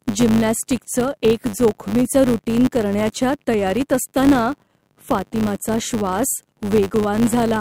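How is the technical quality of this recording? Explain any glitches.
The quality is compromised by one fault. A filter restarted on every block runs throughout. Each 10 ms block begins with a small transient. This produces a 100 Hz buzz that follows the speech level.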